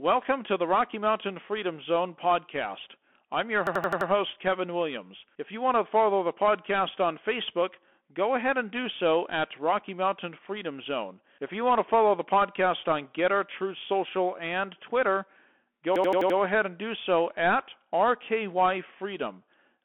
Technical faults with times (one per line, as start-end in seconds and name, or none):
0.00-19.85 Bluetooth CVSD headset codec
3.67-4.10 system hang loop
15.96-16.38 system hang loop